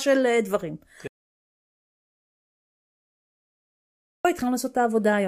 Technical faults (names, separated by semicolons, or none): audio dropout to silence